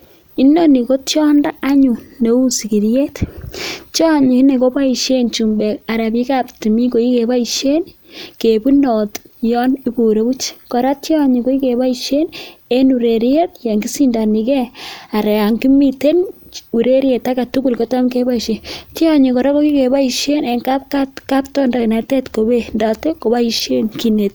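No technical faults are audible.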